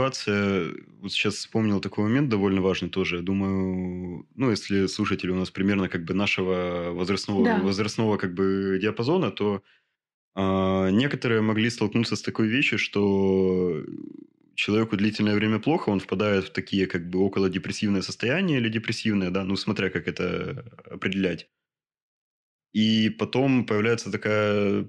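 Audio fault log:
No faults heard anywhere in this speech recording.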